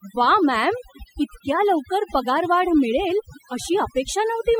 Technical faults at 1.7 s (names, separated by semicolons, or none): overdone noise removal